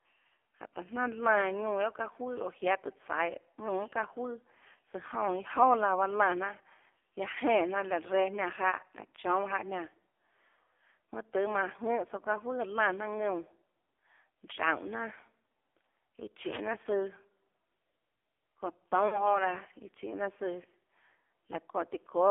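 Throughout, the speech has passed through the AMR narrowband mobile codec at a very low bit rate, which fits AMR's 5.9 kbps mode. Only about 300 Hz to 3.5 kHz survives, and the heavy coding makes the voice buzzy, thin and synthetic.

From 16.43 to 16.60 s, cable scratch noise appears: dense, uneven crackling bursts about 10 dB below the speech, likely from a worn cable or connector being moved so that its contact resistance fluctuated rapidly.

At 19.08 s, lost AMR speech frames remove about 40 ms, which fits two 20 ms frames. The decoder carries the last good pitch and vocal tract settings forward with falling gain, so the sound smears and dips, then returns weak and rough until about 19.39 s.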